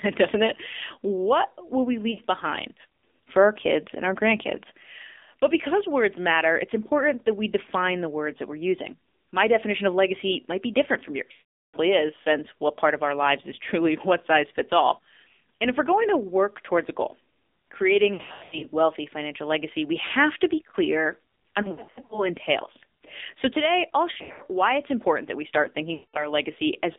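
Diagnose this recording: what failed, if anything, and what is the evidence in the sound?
The call went through the AMR narrowband mobile codec (AMR-NB), at a low mode that fits about 7.4 kbps. The codec stage throws away everything outside a telephone band of roughly 250 Hz to 3.6 kHz and rebuilds the speech from a vocal-tract model driven by sparse pulses. At this bitrate the coding damage is plainly audible across the whole clip: the speech sounds thin, buzzy and synthetic, with no air or sibilance above 3.6 kHz.

Lost AMR speech frames point to the radio network: frames failed their checksum, and the decoder concealed them by repeating the last good pitch and vocal-tract settings at falling gain. The first dropout is brief, about 60 ms at 2.12–2.19 s, between "will we" and "behind for our kids", and it produces a short dip and warble. At 11.32–11.77 s an unbroken 420 ms run stretches the sound out and fades it to silence. 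The losses at 18.14–18.66 s, 21.62–22.29 s (after "have to be clear") and 24.12–24.43 s are scattered bursts, each run no longer than 100 ms. At 25.94–26.33 s, after "important that we start", a 200 ms loss drags and fades the sound before it recovers rough.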